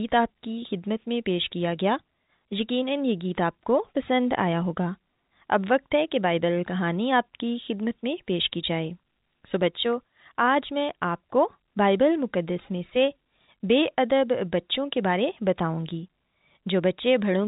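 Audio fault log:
No faults found; the speech runs through G.711 A-law telephone coding at 64 kbps, with nothing above about 3.8 kHz.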